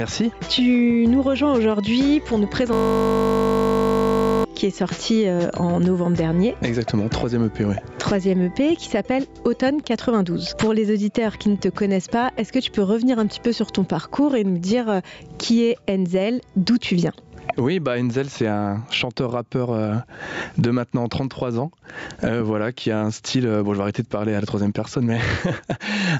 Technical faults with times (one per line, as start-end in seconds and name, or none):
0.00-26.19 gain pumping
2.73-4.45 system hang loop